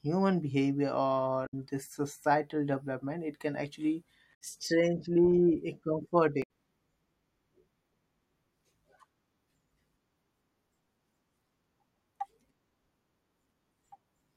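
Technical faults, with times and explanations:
1.45–1.54 s, 4.31–4.35 s (after "development it can actually") and 6.40–6.44 s: damaged data in a compressed stream. Corrupted frames desynchronise the decoder, which resyncs at the next header, giving brief glitches in the speech.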